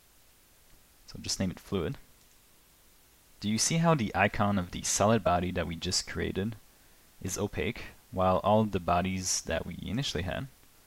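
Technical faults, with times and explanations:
Throughout, low bit depth with dither: the audio carries a constant, even hiss from start to finish. The sound has been stored with only 9 bits. Noise was added before each sample was rounded to those few levels. That noise breaks the link between the rounding error and the signal. So the error turns into steady white noise instead of distortion. The hiss sits at roughly 30 dB below the signal.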